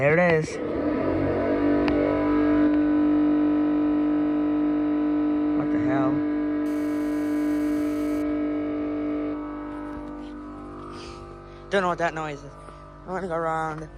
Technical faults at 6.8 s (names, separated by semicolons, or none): GSM phone buzz